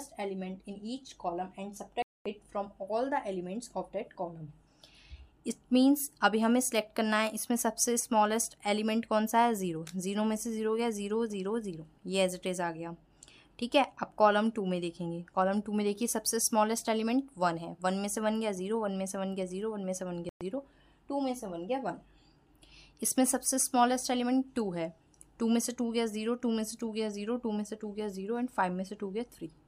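The sound cuts to silence from 2.02 to 2.26 s and again from 20.29 to 20.41 s, resuming further on, a likely Bluetooth dropout from late, discarded packets.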